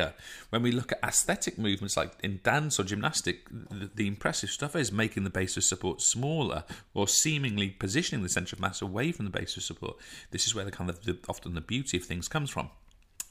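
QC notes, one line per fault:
Nothing to flag here; I listened all the way and didn't hear a single problem worth a line.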